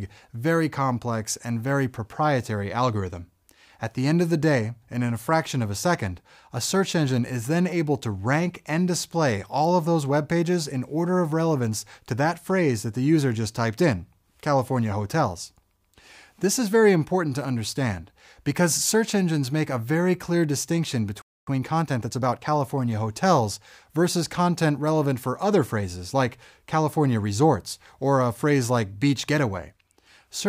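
At 21.22 s the sound just cuts out mid-flow and stays silent for about 256 ms, until 21.47 s. That's a playback stall: the player likely either ran dry of data or had its thread held up, so nothing reached the output until it got going again. You hear a clean gap of silence, and then the audio carries on from where it broke off.

Right after that, from 21.47 to 22.49 s, you get time-compressed catch-up. Having fallen behind during the gap, the player burns off the backlog by snipping out small pieces and cross-fading across the joins, running at 1.25 times normal speed. So for that second or so things sound hurried, but the pitch stays where it should be, because it's dropping material rather than speeding up the playback rate.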